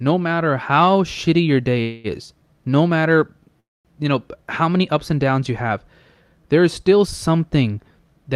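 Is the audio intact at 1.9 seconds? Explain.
No. From 1.81 to 2.07 s, right after "how shitty your day", the last sound is drawn out as a fading buzz or hiss for about 0.23 s, then "is no matter you" resumes with nothing lost. This is a call audio freeze, likely from delayed packets emptying the jitter buffer.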